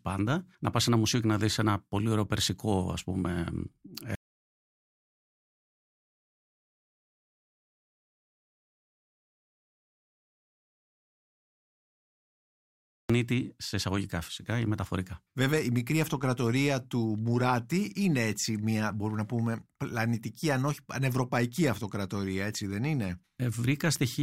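Speech recording with one clear problem: an audio dropout to silence running from 4.15 s to 13.10 s, so close to 9 seconds of the talk is simply gone. The sound cuts off mid-flow and the gap is silent, with no room tone at all, until it picks up again on "σε εισαγωγικά φυσικά ή". That flat, total silence points to the input likely being lost upstream, through a dropped connection or a stray mute, while the recorder kept writing.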